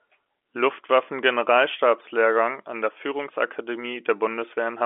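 No technical faults can be heard in this speech.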